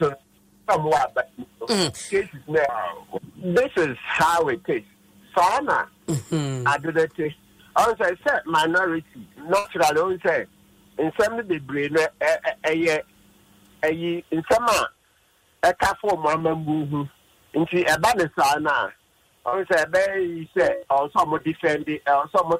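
Short concealed packet loss hits at 0.97–1.01, 7.23–7.26, 16.38–16.43, 19.48–19.54 and 21.38–21.41 s. Each time roughly 20 ms of audio, 40 ms at 19.48, never arrived, and the receiver papered over it by extending the last sound, so you get a quick smear or wobble. A burst of packet loss lands at 9.59–9.66 s, about 60 ms gone in a row. The decoder keeps stretching the preceding sound while fading it, giving a held buzz or dying hiss, then jumps ahead with that stretch simply missing.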